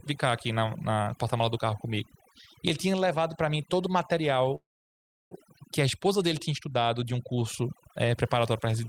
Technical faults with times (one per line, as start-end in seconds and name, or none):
0.00-8.88 overdone noise removal
4.55-5.34 call audio freeze